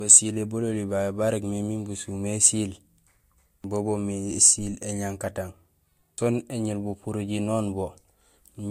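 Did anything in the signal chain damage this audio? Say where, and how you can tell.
Yes, at the codec stage, and it runs the whole way through this speech clip. There's nothing above 16.5 kHz, and the low-bitrate artefacts don't match how clean a high-bitrate MP3 should sound. It's most likely low-bitrate audio saved at a high bitrate: an earlier encode, something like Vorbis at around 47 kbit/s, stripped the detail, and re-encoding at around 192 kbit/s just preserved the damage without restoring anything.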